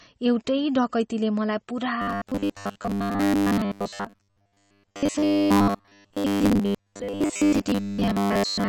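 From the first moment the whole clip carries what sounds like MP3 compression, likely at a low bitrate; the plainly audible damage fits something around 32 kbps. With so few bits, the encoder keeps dropping quieter frequency detail frame by frame, which gives that watery, swirling texture, puts a metallic edge on the s sounds, and softens consonant attacks.

Then at 2.02 s the speech turns robotic and stays that way to the end. This is likely robotic sound from repeated short buffers. Fresh audio isn't arriving often enough, so the playback side keeps looping the last chunk, and the 100 Hz buzz points to a chunk about 10 ms long. Roughly two thirds or more of what you hear from there on is repeated material, which is why a rigid, metallic drone sits over the speech while it still loosely follows the original.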